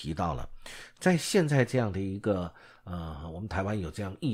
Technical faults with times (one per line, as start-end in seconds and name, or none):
none